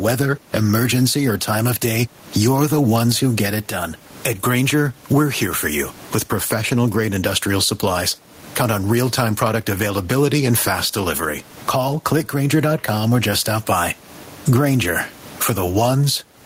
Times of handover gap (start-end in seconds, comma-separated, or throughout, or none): none